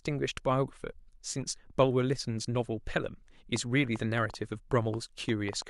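A train of clicks runs from 3.56 to 5.63 s: about ten similar pops at an irregular 4.9 per second, rising above the speech, likely from interference or a faulty connection or power supply.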